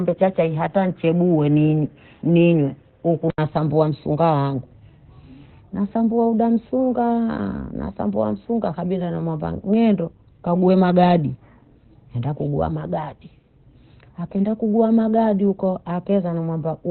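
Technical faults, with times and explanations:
throughout: Opus compression, likely in SILK speech mode at 12 kbps; narrowband coding removes everything above 4.2 kHz, so speech sounds muffled, hoarse and heavily damaged.
0.00–3.38 s: input switched to a poorer device, likely a narrower-band microphone cutting off at 3.7 kHz, so speech sounds duller until an 80 ms silence before "msunga wangu".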